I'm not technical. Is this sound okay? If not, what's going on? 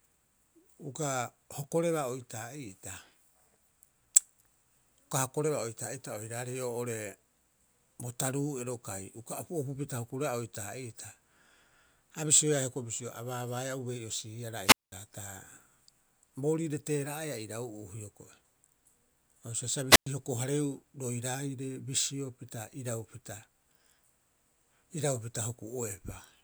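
No. The speech cuts out twice: just after "baabaaea ubei'osiiara", from 14.64 to 14.92 s, and again from 19.90 to 20.06 s. Each time a short burst of hiss comes first, then near silence lasting about 0.2 s and then about 0.11 s, before the speech returns. This is a wireless microphone squelch dropout: the radio signal weakened, and the receiver muted itself rather than pass on loud static.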